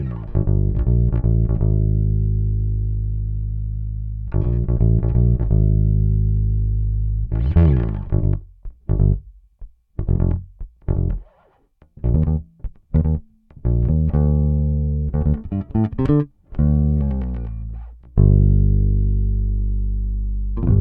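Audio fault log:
No faults detected across the clip.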